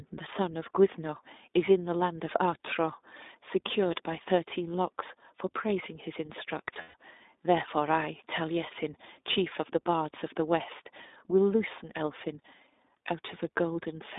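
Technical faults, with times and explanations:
Throughout: iLBC codec. The speech has been through a narrowband VoIP codec coding 20 ms frames, at a bitrate that fits 15.2 kbps, and the damage is plainly audible as a rough, slightly synthetic edge. The line passes only about 250 Hz to 3.7 kHz, so the voice sounds thin and boxed. On a spectrogram everything stops sharply near 3.7 kHz with an empty band below 250 Hz, and harmonics look smeared frame to frame.
6.74–6.95 s: lost iLBC frames. About 140 ms of audio went missing in scattered pieces over a 200 ms stretch, the longest gap near a tenth of a second. The decoder filled each hole by repeating the last pitch cycle blended with noise, so it sounds like a brief held, buzzy vowel, then the voice recovers at once. A spectrogram shows frozen, repeated harmonic stripes; the waveform shows a looped cycle with a softened envelope.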